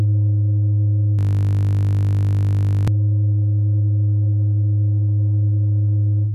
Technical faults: system hang loop

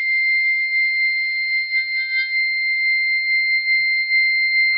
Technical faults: MP3 compression

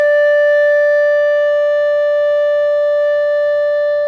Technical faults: none

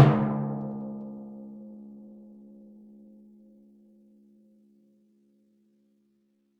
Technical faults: time-stretched section

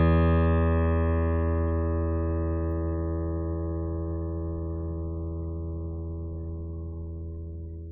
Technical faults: generation loss

